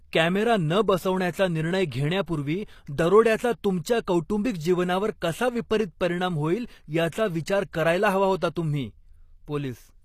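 Throughout this speech recording the treble sounds synthetic: sibilants come out gritty and lispy, the upper harmonics don't sit in line with the lower ones, and nothing is present above 14.9 kHz. That is the signature of HE-AAC compression, with plainly audible damage that points to a low bitrate around 24 kbps. The codec likely carried only the lower spectrum in full and rebuilt the top end by spectral band replication, copying lower bands upward under a coarse envelope, so the treble is an imitation rather than the original. Pre-echo also appears twice as a brief hiss just ahead of a sharp onset, which softens and smears the attack. The first, lasting about 19 ms, is at 2.26 s. The second runs from 7.09 to 7.12 s, roughly 36 ms, between "परिणाम होईल" and "विचार करायला हवा". In each case the transform block holding the attack spread quantisation noise sized for the loud onset across the whole block, so the quiet moment before the attack was filled with noise.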